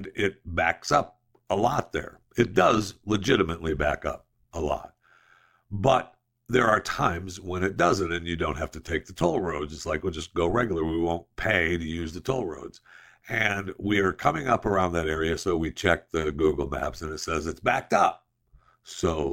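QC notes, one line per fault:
Throughout: overlap-add ripple. The speech carries a metallic buzz, a level rise and fall of about 11 dB repeating around a hundred times a second. The frames were windowed and summed back with an overlap whose gains do not add to a constant, so loudness dips once per frame. Unlike mains hum, no fixed tone is added. The existing sound is amplitude-modulated, which puts extra tones around each note, and the modulation stays locked to the frame rate regardless of pitch.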